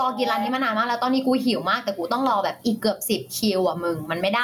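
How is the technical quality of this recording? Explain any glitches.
The recording suffers from gain pumping throughout the speech. The level ducks by around 15 dB under each loud moment, most likely because a fast limiter is reining in excessive gain. Unlike a noise gate, it pulls loud and soft parts closer in level rather than silencing the gaps.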